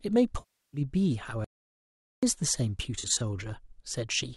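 AAC frame loss with concealment hits at 0.39 to 0.81 s: about 341 ms of coded speech never reached the decoder, which patched the hole by extending the last good spectrum with randomised detail, leaving a smeared, noisy stretch. At 1.44 to 2.23 s an audio dropout to silence cuts the speech off for 0.78 s, likely from the input being lost while the recorder kept writing silence. The gap is dead silent with no room tone. The same frame loss returns from 2.99 to 3.21 s as scattered short gaps, each a few tens of milliseconds, which the decoder filled in with a phasey, grainy texture.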